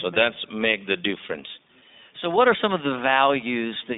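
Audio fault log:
Throughout, iLBC codec: the speech is squeezed into a narrow telephone band, roughly 250 Hz to 3.7 kHz, so it sounds thin and lacks top end. Coding damage is plainly audible as a rough, slightly synthetic texture, consistent with 20 ms frames coded independently at around 15 kbps.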